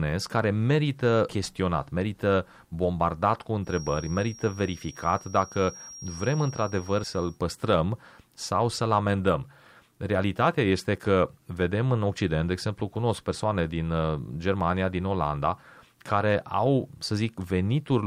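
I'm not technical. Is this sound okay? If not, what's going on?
No. There is a feedback whistle from about 3.61 to 7.41 seconds into this speech clip. A thin, steady high tone around 5.6 kHz sits quietly underneath the talking and slowly swells and fades in loudness. The likely cause is the loudspeaker's sound being picked up again by the microphone, so it loops round and round. That loop is sitting right on the edge of squealing, enough to keep one pitch ringing but not enough to grow louder.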